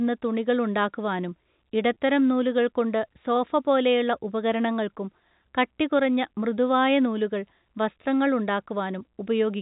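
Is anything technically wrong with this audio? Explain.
Yes. From 1.94 to 1.96 s a packet loss with pitch repetition occurs: a 20 ms gap, consistent with a single lost packet, is bridged by replaying the last pitch period. It sounds like a brief held, buzzy sustain just before "നൂലുകൾ കൊണ്ടു സോഫപോലെയുള്ള ഉപകരണങ്ങൾക്കും" within the G.711 telephone-band speech.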